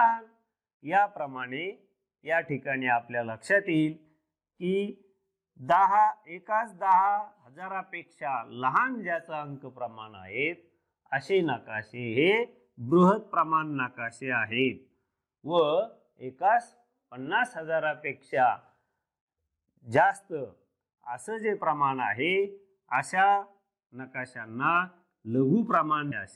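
Damaged data in a compressed stream appears from 26.09 to 26.13 s, just before the clip ends. For roughly 40 ms the bytes reaching the decoder are wrong, whether lost, zeroed or overwritten, so it cannot read the frame that carries this stretch of audio. It loses its place and hunts for the next valid frame header. The result is a brief garbled blip where the damaged frame should have played.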